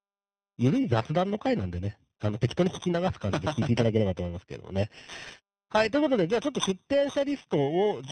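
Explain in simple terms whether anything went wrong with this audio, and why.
G.729 codec, present from start to finish: the speech has been squeezed through a low-rate phone-call codec that doesn't store the actual sound. It stores a rough description of the mouth shape, the pitch and a few pulses, then rebuilds the voice from those. Everything above about 3.8 kHz is gone, so the speech sounds muffled and boxed-in, and the rebuilding is coarse enough that a rough, slightly artificial quality is plainly audible.

Periodic clock jitter, also running through the whole clip: the timing signal that paces the conversion of sound into numbers was being wobbled by interference at a steady rate, around 3 kHz. That wobble smears each part of the voice into extra tones on either side of it, strongest on the brighter, higher sounds. The result is a harsh, metallic edge on the speech that drops away whenever there is silence.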